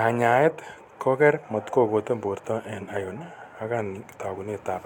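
Speech, with no audible technical fault anywhere in the recording.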